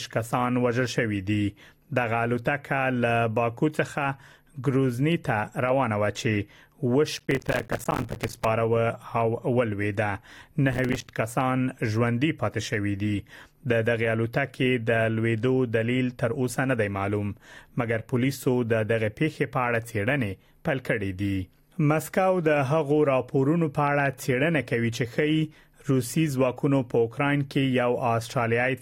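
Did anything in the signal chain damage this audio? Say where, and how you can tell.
Yes: processor overload crackle at 7.17–8.45 s and 10.73–11.08 s. At the driver/buffer stage, short buffers of a few milliseconds missed their deadlines, leaving rapid silent gaps heard as gritty crackle.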